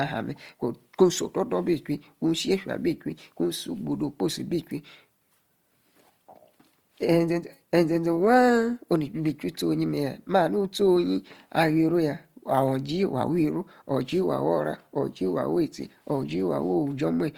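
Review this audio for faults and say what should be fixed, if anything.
Throughout the speech the sound is grainy and rough rather than swirly like MP3, because starved bands are noise-filled. This is likely Opus compression in CELT mode, fitting about 24 kbps. Encoding at a higher Opus bitrate would prevent it.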